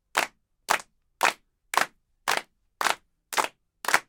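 Listening through the recording of everyday sounds, nothing stood out as a technical problem at any point.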